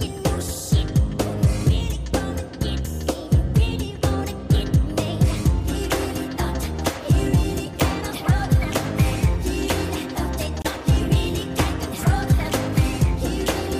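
At 10.62 s, running to 10.67 s, there is a short burst of corrupt frame decoded. Flipped bits in the compressed stream reached the decoder, which played the damaged data as if it were valid. The misread gains and codes placed energy at frequencies that don't belong to the sound. Across roughly three consecutive frames, lasting about 50 ms, it comes through as a short glitch. The error energy peaks at around -10 dBFS.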